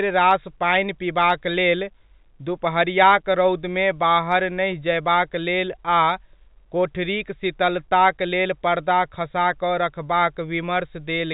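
No technical faults can be heard in the speech; it carries the narrow band of ordinary G.711 telephone coding, with nothing above 4 kHz, as expected of a standard 64 kbps fixed-line channel.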